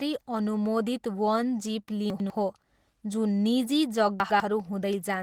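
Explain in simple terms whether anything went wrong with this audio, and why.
Two things went wrong. Throughout the speech there is a hoarse, slightly robotic roughness. That is Opus voice compression: the audio was squeezed into a small amount of data, so the fine detail of the voice was stored only roughly and rebuilt imperfectly on playback.

Twice the speech briefly jumbles, from 2.1 to 2.3 seconds and again from 4.2 to 4.4 seconds, just after "जुन निजी". These are chunks out of order: a 100-millisecond piece of audio arrived one piece late and played after the piece meant to follow it. Nothing is missing, but the order is scrambled at abrupt joins.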